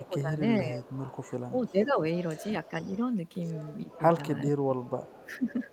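Speech suppressed in double talk, 0.00 to 0.88 s: the speech dips by about 15 dB for most of this stretch, likely because an echo canceller heard both sides at once and turned everything down. Echo leak, 0.81 to 1.74 s: a faint copy of the speech returns 439 ms late, about 25 dB down, likely loudspeaker pickup the canceller failed to remove. The suppression recurs briefly at 1.51 to 1.89 s (about 5 dB), and the echo at 2.49 to 2.97 s. From 3.82 to 5.60 s the speech sinks by up to about 20 dB, while the echo reappears at 3.91 to 3.98 s and 4.82 to 5.72 s.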